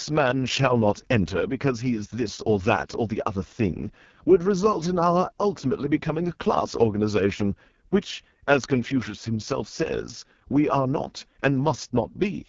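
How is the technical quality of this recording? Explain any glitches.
Technical quality is poor, and the problem runs through the whole clip. The speech has gone through an AMR wideband (HD Voice) codec, and it sounds like one of its lowest modes, which fits roughly 6.6 kbit/s. At that rate the codec rebuilds speech from a crude vocal tract model with sparse pulses, so the speech comes out rough and raspy. The top band is synthetic noise rather than real detail, and there's nothing above 7.5 kHz.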